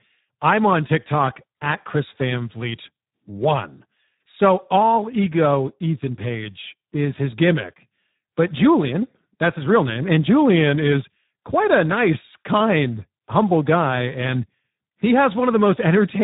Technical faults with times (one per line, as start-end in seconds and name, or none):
0.00-16.24 Speex codec